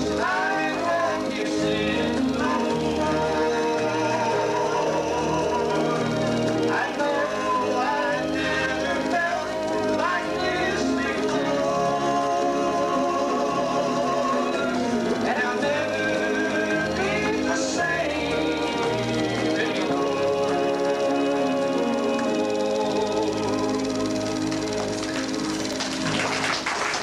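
Nothing goes wrong anywhere in this recording; there's no technical fault to point to at any moment.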